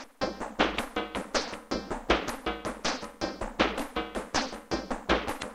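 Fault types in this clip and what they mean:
Damaged data in a compressed stream: a short glitch breaks into the sound from 5.37 to 5.44 s, about 70 ms, near the very end. Corrupted bytes there made the decoder misread those frames and lose sync until it found the next valid frame header.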